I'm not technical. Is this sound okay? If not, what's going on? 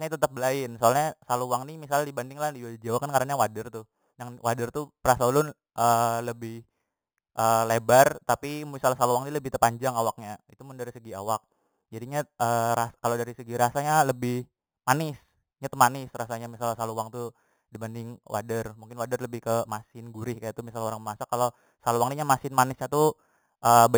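No. Imaging from sample-and-hold upsampling runs throughout: low-rate speech was stretched by repeating each sample without smoothing, adding a metallic fizz mirrored into the 4 to 8 kHz range.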